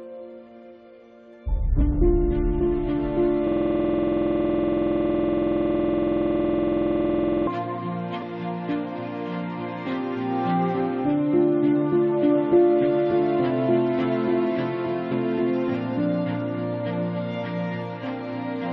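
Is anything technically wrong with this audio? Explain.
Yes, two faults. From 3.48 to 7.47 s, a system hang loop: the system froze while the hardware kept replaying one 46.44 ms buffer, which fits a 2048-sample buffer. That piece repeats 87 times at 21.5 Hz. At 8.19 to 8.23 s, compressed frames were skipped: missing or rejected frames went unplayed, so the audio jumps ahead by about 20 ms.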